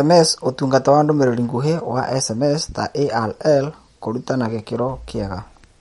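From start to finish the speech has a hard ceiling, with nothing above about 11.2 kHz, and the damage is plainly audible: a watery, swirly texture where quieter detail flickers in and out as the encoder drops weak frequency lines from one frame to the next. That points to MP3 compression, likely at a starved bitrate somewhere around 48 kbps, where the encoder chops the treble at a fixed point and rations what's left.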